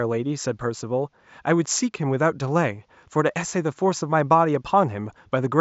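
No technical faults can be heard anywhere in this speech recording. A faint room noise sits underneath, about 51 dB below the speech, and belongs to the space where the microphone was.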